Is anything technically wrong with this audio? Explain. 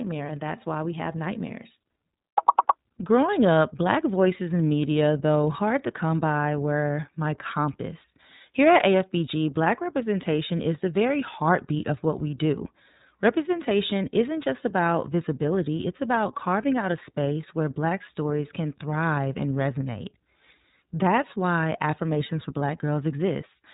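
Yes. The speech runs through the iLBC codec for its whole length, with plainly audible codec damage. This narrowband VoIP coder rebuilds the excitation of each frame independently of the previous one, and the framing points to 30 ms frames, which fits the 13.33 kbps mode. It sounds rough and synthetic. On a spectrogram everything above 4 kHz is empty, a flat ceiling across the whole clip.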